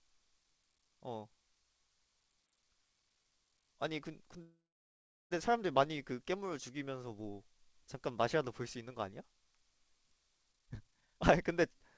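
Speech over a call line, G.722 by the sound of it, with nothing above 8 kHz. At 4.42 s there's a call audio freeze: the sound stretches into a fading buzz and then sits silent for about 0.75 s until 5.33 s, likely from held-up packets draining the jitter buffer. Nothing's lost, just delayed. From 10.52 s to the end there's a jitter buffer speed-up: tiny pitch-period chunks get trimmed, running it at about 152% speed with the same pitch, so it sounds hurried while roughly 0.7 s of backlog is dropped.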